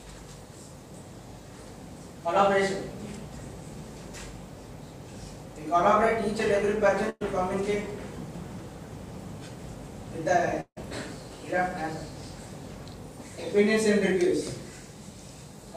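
At 7.09 s there's a burst of packet loss running to about 7.23 s. A short run of packets never made it in time, so the receiver kept extending the last bit of sound for roughly 110 ms, letting it sag away into a held buzz or fading hiss, then a tiny silent sliver of about 10 ms. When the audio picks back up, around 120 ms of material has simply been skipped.

From 10.61 s to 10.78 s you get a longer hole. The last sound gets stretched out and fades for about 160 ms, drops to roughly 50 ms of silence, then the audio jumps back in with about 160 ms of material gone. That stretch-fade-silence shape points to a likely long network dropout, with nothing arriving for that whole window and the receiver padding it out until it gave up.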